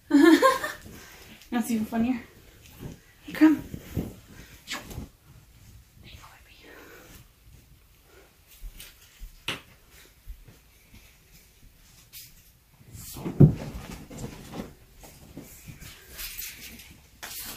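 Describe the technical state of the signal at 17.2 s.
Nothing goes wrong in the signal at 17.2 s; the audio is intact at that moment.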